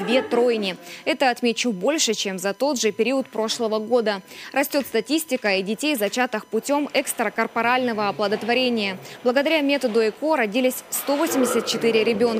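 USB whine runs throughout the clip, a steady fixed-pitch tone at 1 kHz sitting roughly 35 dB below the sound. Current drawn by the USB bus in 1 ms frames leaks into the audio path through shared power or ground, producing this constant high whine.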